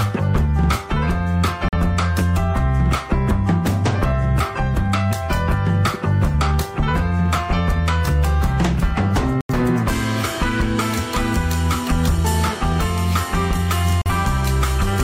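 The audio has three digital broadcast dropouts, at 1.69 to 1.76 s, 9.41 to 9.54 s and 14.02 to 14.11 s. At each, the receiver muted after losing data, consistent with one, two and one lost 43 ms frames, which appear as flat gaps in the waveform and blank vertical bands in the spectrogram.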